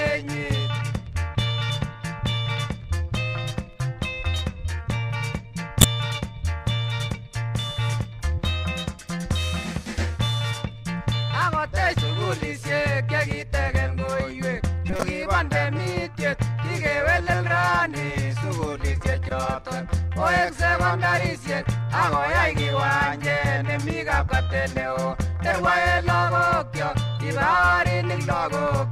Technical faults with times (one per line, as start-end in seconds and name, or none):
5.81-5.84 corrupt frame decoded
14.90-15.05 corrupt frame decoded
19.29-19.31 corrupt frame decoded